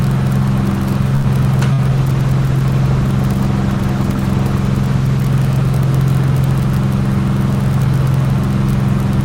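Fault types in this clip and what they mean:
Short stall from a late packet: A packet showed up late, the jitter buffer ran dry, and the receiver held the last bit of sound until it arrived. You hear it around 1.15 to 1.27 s as a sound that hangs on about 87 ms too long, then carries on from exactly where it left off. Nothing's actually lost, but everything after that point lands about 87 ms later.
Burst of packet loss: Shortly after, around 1.73 to 1.81 s, a run of audio never made it in time to be played. The receiver covered the hole by stretching the last sound for about 53 ms and letting it fade, then jumped ahead. Roughly 60 ms of the real audio is simply gone, so the sound skips forward rather than picking up where it stopped.
Call bitrate drop: From about 1.92 s to 5.39 s the call's bandwidth estimate dipped and the encoder got squeezed from 40 kbps down to 17 kbps, sitting at that low rate for about 3.4 s. 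With fewer than half the bits to work with, Opus codes everything more coarsely, so the sounds in that stretch come across rougher and grainier until the rate climbs back.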